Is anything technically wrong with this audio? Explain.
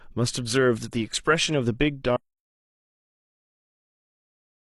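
Yes. At 2.17 s the speech cuts off abruptly into an audio dropout to silence that lasts to the end of the clip, about 2.5 s. The input was likely lost, through a disconnected device, failed link or accidental mute, while the recorder kept writing silence. Unlike a noise gate or a fade-out, there is no gradual decay and no residual room tone, just dead silence mid-flow, and the rest of the speech is gone.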